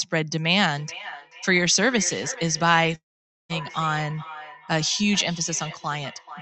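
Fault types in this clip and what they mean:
Feedback echo between two devices: from 0.75 s to the end, speech returns roughly every 0.4 s, thinner and ringing, peaking about 15 dB below the voice.
Long network dropout: at 2.95 to 3.51 s, sound smears into a fading buzz, then near silence for about 0.48 s, likely from lost packets.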